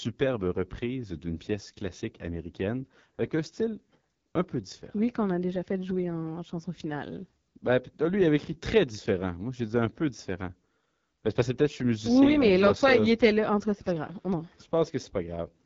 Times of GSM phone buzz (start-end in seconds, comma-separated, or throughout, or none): none